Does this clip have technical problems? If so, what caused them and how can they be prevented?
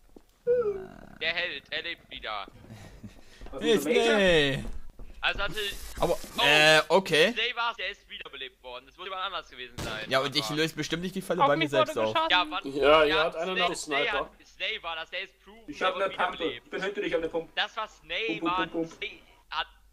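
Yes. There are five spots where compressed frames were skipped: 5.97 s, 7.75 to 7.77 s, 12.29 s, 13.67 to 13.69 s and 19.02 s. Each time, whole blocks of encoded audio were never played, either because they were missing or because the decoder rejected them as damaged, so the sound lurches forward. The jumps range from well under a tenth of a second to about a third of a second. To prevent it, check file integrity after transfer or storage, and use a container or stream with error protection so damaged frames can be resent instead of dropped.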